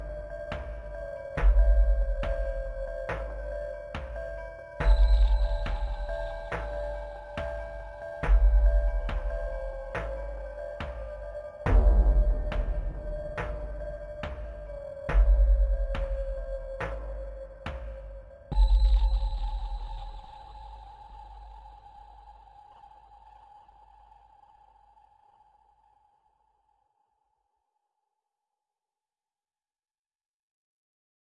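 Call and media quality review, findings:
No faults found on review of the audio. No component flagged for follow-up.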